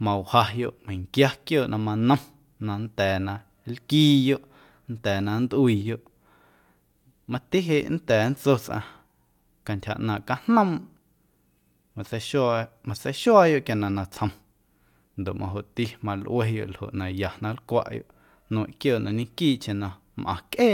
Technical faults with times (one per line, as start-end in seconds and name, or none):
none